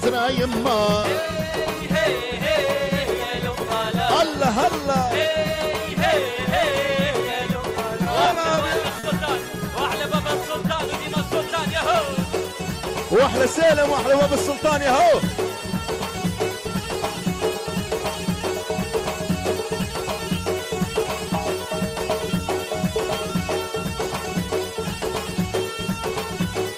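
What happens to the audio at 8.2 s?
The sound drags and stutters from 8.03 to 8.59 s, with four brief stalls. These repeated stalls (stutter) come from late packets emptying the jitter buffer. The receiver held the last sound for 60 ms in all, the longest gap 30 ms, so nothing is lost.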